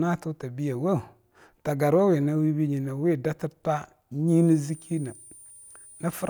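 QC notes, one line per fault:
4.28–6.29 s, switching supply whistle: a faint high whistle near 10 kHz, drifting between 8.9 and 10 kHz, from a power supply cycling at an audible rate.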